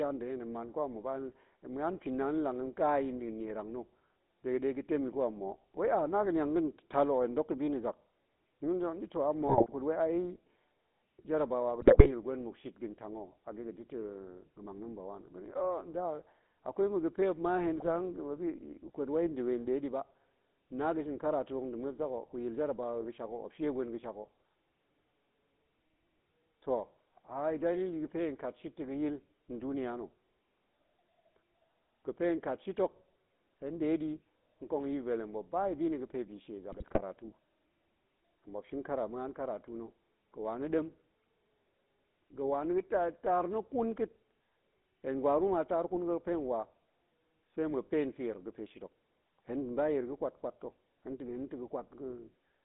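The whole clip passes through the GSM full-rate codec. The speech is rebuilt from a vocal-tract filter driven by a sparse, regularly spaced pulse excitation, at a rate that fits the 13 kbps full-rate stream, and the line keeps only about 200 Hz to 3.7 kHz. The result is a plainly audible buzzy, gravelly grain over every syllable, with no air or sibilant sparkle above the band.

GSM bit errors hit four times: 9.47 to 9.69 s, just before "kut wai"; 11.80 to 12.10 s; 17.73 to 17.89 s; and 36.72 to 37.01 s, just after "bi shie". Corrupted filter, pitch and gain values reach the decoder, so for a run of frames the spectrum warps and the level jumps. The sound breaks into squawks, pops and a gargling smear. The densest error rate, around 3 percent, falls in the burst near 12 s.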